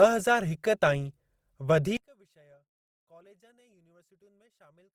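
From the start the speech sounds grainy and rough, with a noisy texture where the voice should be clean, though the top end stays open rather than muffled. This is Opus compression, likely in its music-oriented CELT mode at a low rate that fits about 24 kbps. With too few bits, the encoder keeps each band's overall energy but fills its detail with folded or noise-like content. The result is grit rather than swirling holes.

At 1.97 s the speech suddenly collapses in a mono listen, dropping by about 34 dB and leaving only a faint residue that lasts to the end. The likely cause is one channel inverted: one side of the stereo pair has flipped polarity. When the two channels are summed, everything they share, including the centred voice, cancels almost completely. Only the small differences between left and right survive.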